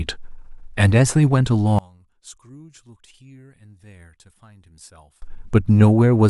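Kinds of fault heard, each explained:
One channel inverted: from 1.79 to 5.22 s the speech drops about 29 dB, likely a reversed-polarity channel cancelling in mono; the waveform shrinks and the spectrogram fades.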